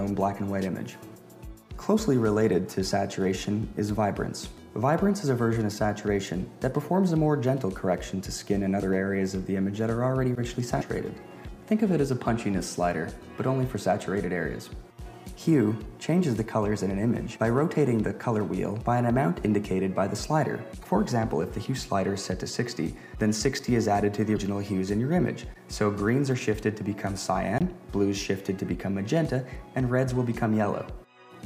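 At 10.78 to 10.82 s, 20.81 to 20.85 s and 24.33 to 24.38 s, damaged data in a compressed stream makes the decoder misread frames and hunt for the next header. Each is brief.

At 23.59 s and 27.58 to 27.61 s, blocks of digital silence cut the audio out and back without a fade. The 5.8 ms block is a tick and the 23 ms one a short hole, fitting 256- and 1024-sample buffers.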